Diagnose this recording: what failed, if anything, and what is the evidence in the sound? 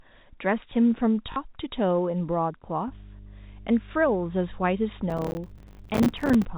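Packet loss with the last packet repeated is a network-stage fault heard at 1.32 to 1.36 s. For 40 ms the speech freezes into a short robotic stutter, with a brief buzz, which fits two lost 20 ms packets that the receiver filled by replaying the last good one. Unlike a dropout, the gap is filled with repeated sound rather than silence, and unlike crackle it is a single brief event.

Mains hum enters in the analogue wiring at 2.88 s and runs to the end of the clip. It is a steady 50 Hz tone with low harmonics, roughly 20 dB below the speech. A ground loop or a nearby transformer is coupling the power line into the signal. The tone holds a constant pitch and level regardless of what is said, which separates it from the packet-rate buzz of the stutter.

Processor overload crackle is a driver or buffer fault from 5.1 to 6.45 s. A gritty tearing rides on the speech and stops when the load passes. 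The sound points to small buffers of around 5 ms, with dozens of deadlines missed again and again, each filled with silence and leaving a hard-edged gap. Unlike the single packet-loss event, these are many tiny, dense breaks spread over more than a second.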